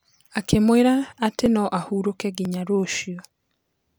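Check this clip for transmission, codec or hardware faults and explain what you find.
There are three skips of the same kind, audio missing between chunks, at 1.46 s (just before "no ahurũke"), 2.45 s (right after "atĩ no ahurũke") and 3.45 s. The likely cause is the recorder dropping a few milliseconds at each 1-second chunk boundary, so the speech jumps slightly, once a second.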